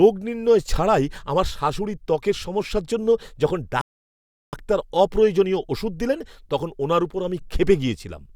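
Speech, with a rebuffering stall from 3.81 to 4.53 s: playback starves, goes silent for about 0.72 s, then picks up exactly where it left off, nothing lost.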